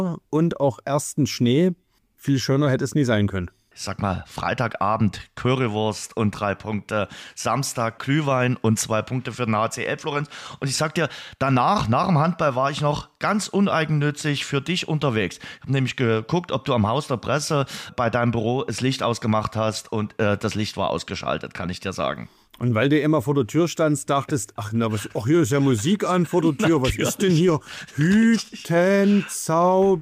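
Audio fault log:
Nothing to log here, as I didn't hear anything go wrong anywhere in the clip.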